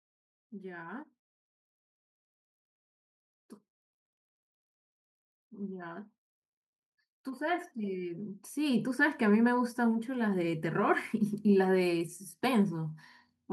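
At 7.05 s the automatic gain starts rising. The level climbs steadily until 12.17 s, gaining about 9 dB over roughly five seconds. The gain control judged the input too quiet and kept turning it up. The adjustment is slow, so there is no jump. The speech and the background noise swell together, since the whole signal is boosted.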